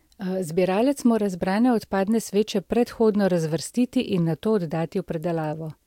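A speech recording, and nothing is technically wrong with it.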